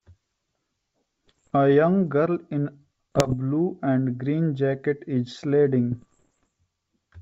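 Between 1.27 and 1.55 s, 3.12 and 3.35 s, and 5.92 and 6.47 s, the speech is hit by bit errors on an ADPCM link, at roughly 1.0, 1.5 and 0.7 bits in a hundred respectively. Each flipped bit throws off the decoder's step size and predictor, so the damage rings on briefly as pops and gritty bursts with sudden level jumps. The waveform shows spiky, uneven envelopes, and the spectrogram shows scattered broadband vertical streaks over the wideband G.722 picture.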